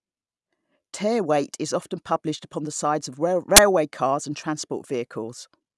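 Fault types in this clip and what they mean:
File tags played as audio: from 3.56 to 3.58 s the speech is broken by a 20 ms burst of very loud white noise with hard edges, the compressed bytes of an embedded cover picture read as samples. Unlike a click or dropout, it is dense, even static.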